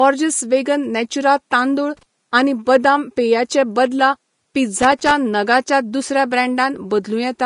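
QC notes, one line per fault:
throughout: Vorbis compression, plainly audible, with nothing above 10.5 kHz. The speech has a grainy, hissy top where treble detail has been quantised into noise, likely from low-rate Vorbis encoding around 35 kbps; unlike broadband hiss, the graininess tracks the speech itself.
1.97–2.03 s and 4.82–5.11 s: loose connector crackle, heard as irregular bursts of scratching, the first between "नेचुरा तांदूळ" and "आनी बदाम पेया चे", the second lasting about 0.29 s. A contact making and breaking chops the signal, so unlike steady codec grain these arrive as isolated, ragged bursts.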